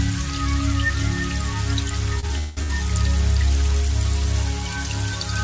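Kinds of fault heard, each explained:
Short stall from a late packet: A packet arrived late and the jitter buffer ran dry, so the receiver held the last sound until it came. This happens at 2.20 s and 2.63 s. Each hold stretches the sound briefly with a faint buzz or dip. Nothing is lost.
Call audio freeze: From 2.38 to 2.59 s the sound turns into a fading buzz or hiss that never reaches silence. Audio then resumes exactly where it stopped, so a gap of about 0.19 s is inserted. The likely cause is packets held up in transit, emptying the jitter buffer.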